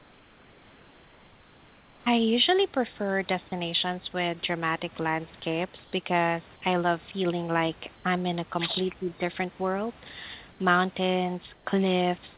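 From the start to 2.06 s, the quiet background, sitting roughly 30 dB below the loudest speech, becomes a smooth, featureless hiss about 3 dB quieter than the real room noise. The same swap comes back briefly at 5.84 to 5.92 s (about 2 dB quieter), 10.52 to 10.60 s (about 3 dB) and 11.54 to 11.66 s (about 4 dB). This is comfort noise in place of the background, likely from discontinuous transmission: the sender stopped sending when its voice detector heard no speech and the receiver filled each gap with synthetic noise shaped after the background.

Between 8.89 and 9.21 s the speech dips sharply, at its deepest by roughly 20 dB, across around a fifth of a second. This is speech suppressed in double talk, likely caused by the echo canceller attenuating this talker because it could not tell the near voice from far-end echo while both sides spoke. Throughout, the band stops at 4 kHz, which fits a G.711 mu-law call path.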